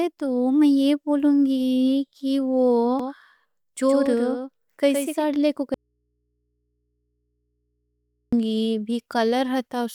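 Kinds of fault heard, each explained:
Doubled audio track: From 3.00 s to 5.24 s the speech has a second, full-band copy trailing roughly a tenth of a second behind, only about 5 dB quieter. The copy sounds dry, with no decay or room colour, and it starts and stops abruptly. This is likely the same signal captured a second time through a slower path, or an edit leaving two copies mixed out of step.
Audio dropout to a faint residue: At 5.74 s the speech cuts off mid-flow and returns abruptly at 8.33 s, a gap of 2.58 s. The gap is not silent but holds a low mains hum, around 50 dB below the speech. The wanted signal was likely lost upstream while the path after the break stayed live, so the open input's hum came through in its place.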